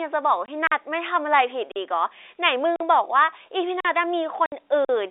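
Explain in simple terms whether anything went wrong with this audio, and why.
Packet loss filled with silence, at 0.46–0.48 s and 4.46–4.52 s: pieces of the speech went missing in transit and were replaced by dead silence. The holes last 20 ms and 60 ms, which fits packets of 20 ms each, and their edges are abrupt.

A gap between chunks occurs at 0.67, 1.72, 2.76, 3.80 and 4.85 s. The audio arrives in one-second blocks, and a 44 ms silence sits at each join. Nothing is lost, but the speech stops briefly at each boundary, giving a steady, evenly spaced stutter.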